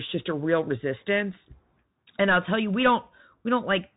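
From start to end, the speech passes through a Bluetooth CVSD headset codec. Nothing above 3.8 kHz survives. The one-bit slope coding adds granular hiss, scratchy s sounds and distortion on loud highs.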